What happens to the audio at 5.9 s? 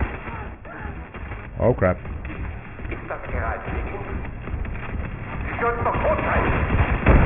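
At 5.9 s the sound carries aliasing, present through the whole clip. Content above a 3 kHz fold folds back as unrelated, gritty tones, fitting a drop to a 6 kHz rate without filtering, at roughly 15 dB below the signal. Plain band-limiting would only dull it.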